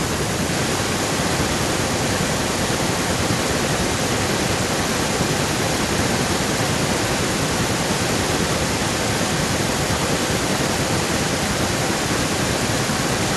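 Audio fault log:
0.53 to 13.36 s, echo leak: a second copy of the speech trails the original by about 0.92 s, only a little quieter than the direct sound, so the two overlap and blur. This is likely a far-end loudspeaker whose echo canceller let its microphone's pickup slip back into the call. On a spectrogram, each burst of harmonics reappears shifted right by 0.92 s at slightly lower intensity. The waveform shows envelopes duplicated with the same lag.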